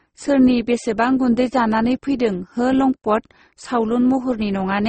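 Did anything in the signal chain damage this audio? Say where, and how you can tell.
Yes, at the codec stage, and the damage runs through the whole speech clip: it was most likely transcoded between lossy codecs, a very low-rate Opus encode re-encoded as MP3. Nothing reaches above 8.4 kHz, the lowest cut-off in the chain, which stays. On top of that the MP3 layer adds its own artefacts, spending its limited bits on the first codec's artefacts. Both sets of damage are heard together, which fits roughly a 16 kbit/s stage feeding a 32 kbit/s one.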